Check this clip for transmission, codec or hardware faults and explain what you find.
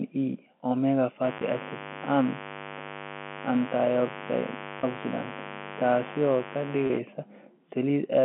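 Two faults are present: mains buzz and packet loss with pitch repetition. The telephone-band G.711 coding underneath is working as expected, with the sound limited to roughly 200 Hz to 3.4 kHz.

Mains buzz runs from 1.21 s to 7.01 s. It is a 50 Hz hum with sharp harmonics stacked above it. Switching spikes from a dimmer, rectifier or poor shielding get into the line twice per mains cycle. It is loud, only about 10 dB below the speech. It sounds like a steady, raspy buzz under everything.

Packet loss with pitch repetition occurs three times, at 1.38 s, 4.80 s and 6.87 s. Each gap lasts about 30 ms, which fits one lost packet each time. The receiver fills the hole by repeating the last pitch period. The gaps are short, so nothing drops to silence. Each one sounds like a brief held, buzzy tone before the speech carries on.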